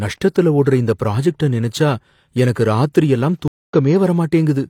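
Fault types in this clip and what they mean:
Stream reconnect, 3.48 to 3.74 s: the connection dropped, leaving a gap of about 217 ms before a fresh decoder picked up mid-stream. The speech resumes slightly further along, roughly 150 ms later, so a short stretch is skipped, as a live stream would do.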